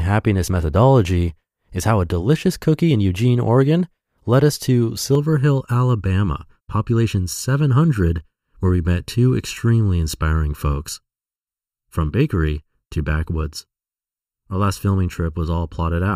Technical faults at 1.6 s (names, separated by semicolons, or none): none